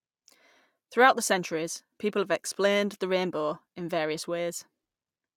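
A speech recording with no audible technical faults.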